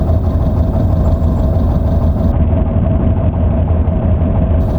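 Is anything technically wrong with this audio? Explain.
Yes. From 2.32 s to 4.60 s there is a Bluetooth SBC bit pool drop. The link seems to have become congested, so the sender cut the SBC bit pool to keep the audio moving. The sound points to a fall from a bit pool near 28 to one near 6, which fits roughly 60 kbps. With so few bits, the upper sub-bands go nearly empty. The lower bands are quantised coarsely. The treble turns dull, and gritty noise rises until the end of that stretch.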